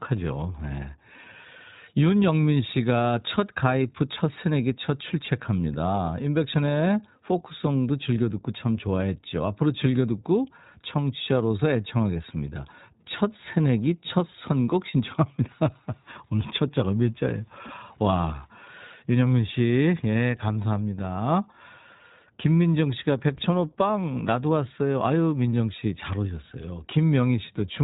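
From start to finish the speech carries iLBC codec damage, plainly audible. The band stops near 3.8 kHz, so sibilants sound dull, and voicing has a rough, synthetic edge from independently coded excitation per frame, consistent with 20 ms frames at about 15.2 kbps.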